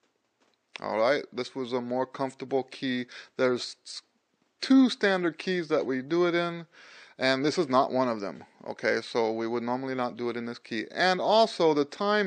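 No technical faults are audible.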